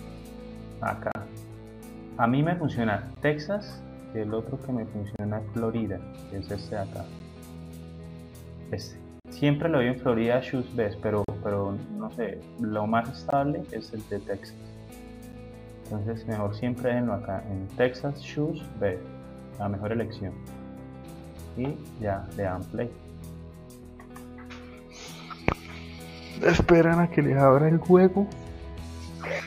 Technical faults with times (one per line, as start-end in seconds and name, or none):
1.12-1.15 gap between stream segments
3.15 gap between stream segments
5.16-5.19 gap between stream segments
7.19 gap between stream segments
9.20-9.25 gap between stream segments
11.24-11.29 gap between stream segments
13.30-13.33 gap between stream segments
15.32 gap between stream segments